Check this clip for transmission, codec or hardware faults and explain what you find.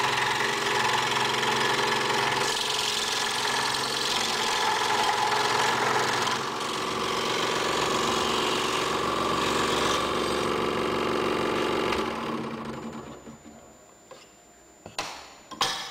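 One hardware fault: from 12.73 s to the end, a switching supply whistle near 7 kHz, wandering between 7.02 and 7.18 kHz, about 30 dB below the signal. A power supply's switching is running in the audible range, unlike mains hum's low, fixed harmonics.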